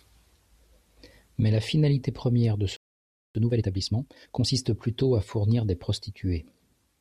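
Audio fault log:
2.77–3.35 s, playback stall: right after "la finalité première de" the speech cuts to silence for about 0.58 s, then resumes. The player likely ran short of data or had its output thread blocked, so nothing reached the output until it recovered.
3.35–4.51 s, time-compressed catch-up: the resumed speech comes out hurried, at about 1.5 times normal speed but unchanged pitch, until "plutôt à fournir des". The player is cutting small slices from its backlog and cross-fading the joins to make up the delay.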